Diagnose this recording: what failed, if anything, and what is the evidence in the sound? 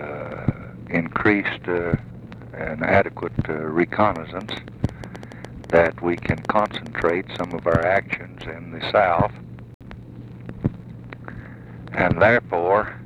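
Irregular ticking from 4.16 to 8.42 s, about 7.8 clicks per second and peaking a few dB above the sound. This train of clicks is likely interference on analogue wiring.

Sound drops to silence from 9.74 to 9.81 s, losing 64 ms. This is a digital broadcast dropout: the receiver muted on failed frames, consistent with two frames lost.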